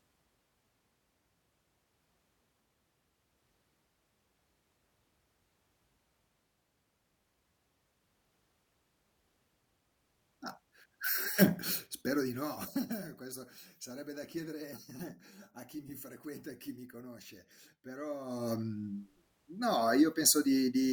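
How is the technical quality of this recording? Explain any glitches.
There is one glitch, near the end. Zipper noise from 18.18 to 18.53 s: a level change of about 15 dB is applied in unsmoothed steps, roughly a hundred per second, so a fine ticking buzz rides on the speech.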